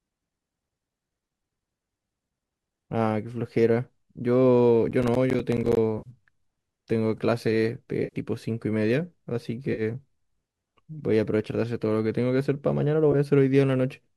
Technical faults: processor overload crackle; AAC frame loss with concealment

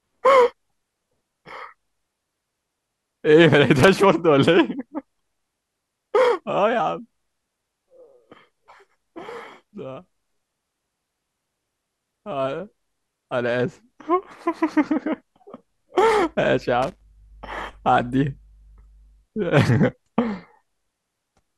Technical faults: loose connector crackle

